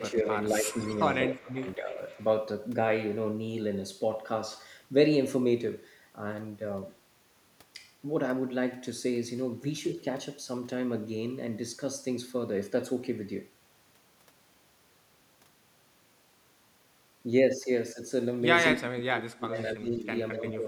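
Right at the start, from 0 to 0.78 s and again from 1.26 to 2.0 s, the speech dips by up to about 15 dB. That's likely speech suppressed in double talk, with the canceller ducking this talker while the far side is speaking. A faint echo leak slips through at 0.8, 1.29, 1.69 and 2.08 s: a copy of the speech arriving about 210 ms late and around 20 to 30 dB down, likely loudspeaker pickup the canceller missed. The suppression returns from 18.78 to 20.07 s, cutting as deep as about 25 dB, and once more from 20.33 to 20.66 s.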